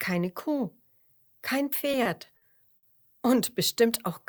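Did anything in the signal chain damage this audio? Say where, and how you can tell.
Yes. Between 1.91 and 2.85 s the audio shows repeated stalls (stutter), a fault at the network and jitter buffer stage. Packets arrived late, so the buffer ran dry four times and the receiver held onto the last sound for about 160 ms in total, the longest pause near 70 ms and roughly 17% of that stretch. Nothing is cut out; the sound simply drags and hiccups, which distinguishes it from packet loss, where material actually disappears.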